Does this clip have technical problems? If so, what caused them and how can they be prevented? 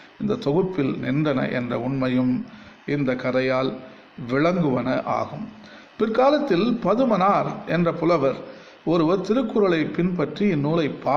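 No, nothing stood out as a technical problem on listening to this clip.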